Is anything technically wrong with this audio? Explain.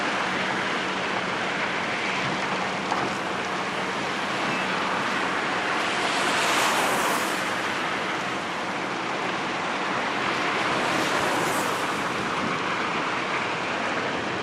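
No, nothing technically wrong is audible anywhere in the clip.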